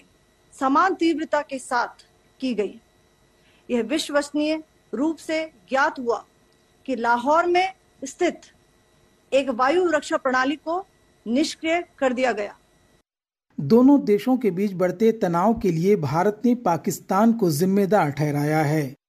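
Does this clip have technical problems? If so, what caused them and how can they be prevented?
No, nothing stood out as a technical problem on listening, so there is no cause to trace and nothing to prevent.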